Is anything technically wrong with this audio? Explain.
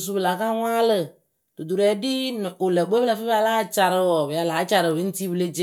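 No, nothing technically wrong stands out in this speech recording; there's nothing here that needs fixing.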